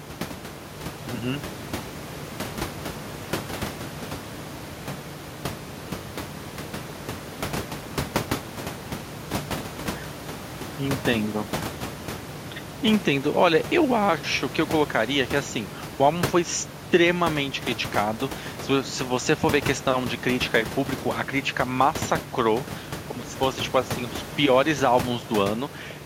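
Nothing technical goes wrong anywhere in this speech recording, and the only thing in the background is the room's own noise sitting about 14 dB under the voice.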